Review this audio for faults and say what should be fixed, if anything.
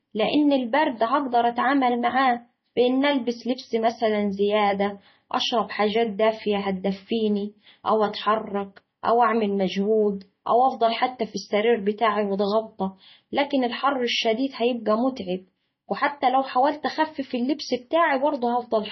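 Throughout the speech, nothing remains above 6 kHz, and the sound is watery and swirling, with chirpy s sounds. This is likely heavy MP3 compression at a bitrate near 24 kbps. A plain low-pass filter would not swirl: the encoder here is short of bits and drops weak frequency lines from one frame to the next. To prevent it, encode at a much higher bitrate or keep a lossless master.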